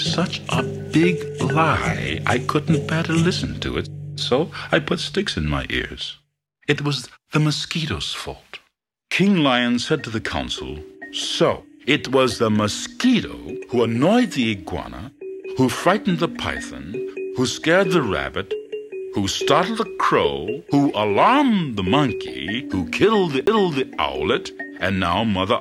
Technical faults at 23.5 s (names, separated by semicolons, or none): CD skip